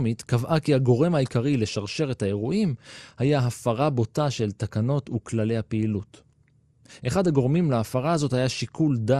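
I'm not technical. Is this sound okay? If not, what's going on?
No. The speech sounds dull and muffled from start to finish. There's a gurgling, grainy roughness on top. That points to MP2 compression, likely at too low a setting. Not enough data was kept, so the upper sounds switch off and flicker.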